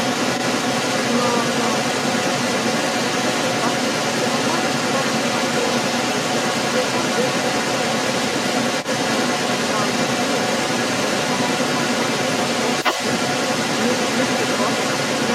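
From 0 to 15.35 s, the other side's voice leaks through: a second talker runs alongside the speech, roughly 5 dB louder. The likely cause is loudspeaker playback the echo canceller missed. Unlike reverberation, it is a separate voice, not a smeared copy.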